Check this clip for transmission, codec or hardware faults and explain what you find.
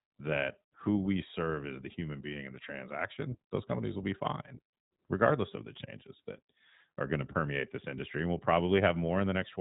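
The speech has a narrowband, slightly rough and synthetic quality throughout. It is thin and boxy, with nothing above about 3.8 kHz. These are the marks of the iLBC codec, and the damage is plainly audible. iLBC codes each short frame's excitation independently of the frame before, and the grain here fits its 15.2 kbps mode with 20 ms frames. Without carry-over between frames, the voice turns slightly coarse and buzzy, while the 3.8 kHz ceiling removes the crisp top of sibilants.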